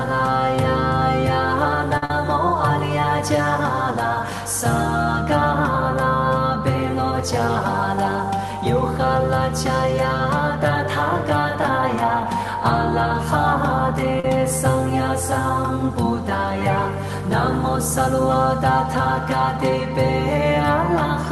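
At 1.97 to 2.03 s, a short stall from a late packet: the jitter buffer ran dry and the last sound was held for 48 ms, then resumed unbroken. Nothing is lost; everything after it simply plays 48 ms later.

At 2.05 to 2.10 s and again at 14.20 to 14.25 s, short concealed packet loss: about 40 ms never arrived and was bridged with a synthetic continuation, giving a brief smear or wobble. Unlike the stall, that sound is actually gone.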